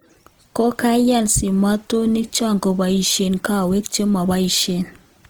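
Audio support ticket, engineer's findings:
Throughout: speech rough and grainy, harmonics turned noisy rather than clean, little swirl and few spectral holes, bandwidth intact to about 20.2 kHz. Likely Opus compression in CELT music mode, starved bands refilled with folded or noise energy; damage level fits roughly 24 kbps.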